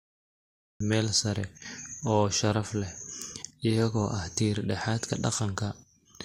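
Right at the top there's a cut-off start. The first 0.80 s is dead digital silence, and then the speech just appears at 0.80 s, already partway into a sound. Whatever captured or streamed this began late, so the opening of that utterance never made it in. You hear no natural attack and no fade, just nothing and then talking, which makes the entry feel abrupt and clipped off.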